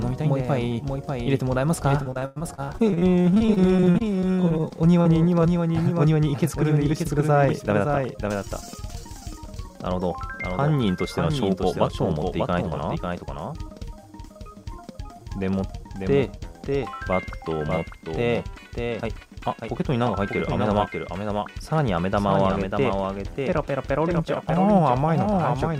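A doubled audio track runs through the whole clip. A second full-band copy trails the original by roughly 0.7 s. It sits about 5 dB below it. The copy has no decay and no room colour, so it sounds like a clean, late repeat rather than an echo. Every onset returns a moment later. The likely cause is a second, slower capture path mixing the same audio back in.

From 2.03 s to 5.09 s comes repeated packet loss, with a robotic sound. The stream drops out again and again in short holes. The longest is about 100 ms. Each hole is patched by stretching the last bit of sound forward. About a fifth of this stretch is concealed this way. The result is choppy, with pieces of the sound missing.

At 7.73 s to 7.99 s there is a jitter buffer speed-up. The receiver held too much audio and trimmed it by cutting out tiny pitch-period slices, about 40 ms in total. The sound runs at 112% speed with its pitch unchanged. 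It briefly feels hurried. A second speed-up follows from 12.51 s to 13.07 s. This one runs at 108%, and roughly 50 ms is removed. It gives a milder but longer rush.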